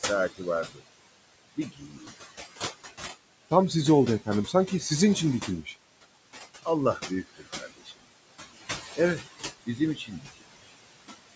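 From the start, the recording shows noise suppressor artifacts. The steady room noise, which sits about 12 dB below the speech, is pulled down by about 20 dB in the pauses and comes back up under each phrase, so the background pumps with the talking. Codec warble stays put when the speaker stops. This fault tracks the gaps between words.

Speech cut by the noise suppressor shows up six times: 0.64–0.81 s, 1.56–2.1 s, 4.46–4.84 s, 5.44–5.74 s, 6.99–8.03 s and 9.66–10.42 s. Each time the suppressor mistook part of the speech for noise and lowered it along with the background, by about 9 dB at 4.46 s and as much as about 20 dB in the last two stretches. Consonants and word endings sound swallowed or faint. A packet-loss dropout, by contrast, leaves a hard gap of silence.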